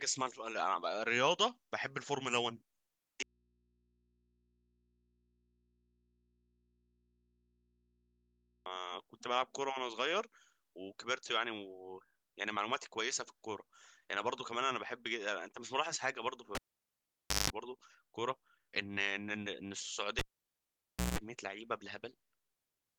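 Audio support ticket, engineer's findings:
Speech cuts out abruptly 3.23–8.66 s, about 5.4 s of bare mains hum roughly 40 dB down. Audio dropout to a faint residue, likely a lost feed into a still-live input.

Pop, near silence, brief buzz, pop at 16.55–17.5 s (0.17 s of 50 Hz buzz) and 20.19–21.19 s (0.17 s of 60 Hz buzz). Cable pulled and plugged in; tip-only contact hums.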